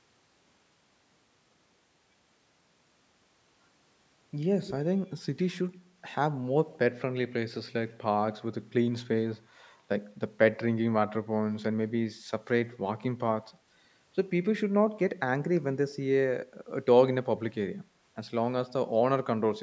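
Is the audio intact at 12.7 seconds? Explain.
No. From 12.71 to 12.78 s there is a brief echo leak: a faint, delayed copy of the speech, trailing the original by about 207 ms and sitting roughly 25 dB below it. It sounds like a short ghost of the speech. The likely cause is a far-end loudspeaker whose sound reached the microphone, with the echo canceller failing to remove all of it before it was sent back.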